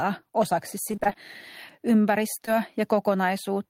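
From 0.91 to 1.16 s, repeated packet loss leaves seven short gaps, the longest 22 ms, patched by extending prior sound, so the speech turns choppy; the spectrogram shows smeared, ladder-like harmonics.

Between 1.81 and 2.02 s, a jitter buffer slow-down repeats pitch periods, adding 38 ms and playing at 86% speed; vowels stretch at unchanged pitch, with visibly repeated waveform cycles.

At 2.46 to 2.49 s, a short concealed packet loss fills 13 ms of a 20 ms hole, heard as a brief smear or wobble and seen as a slight spectral blur.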